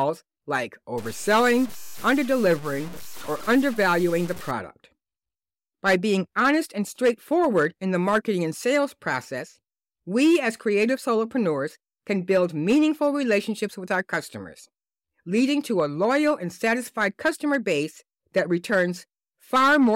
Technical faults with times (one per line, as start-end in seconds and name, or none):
0.98-4.51 low bit depth without dither